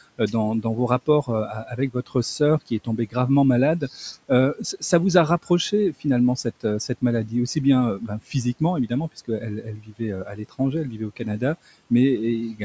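Speech cut by the noise suppressor occurs from 0.18 to 3.15 s, 3.8 to 4.82 s and 5.43 to 11.91 s. The suppressor mistakes quiet speech for noise and turns it down by up to about 15 to 18 dB, leaving scattered soft syllables and endings swallowed. That adds up to roughly half a second, a brief moment, and about a second in the three spans.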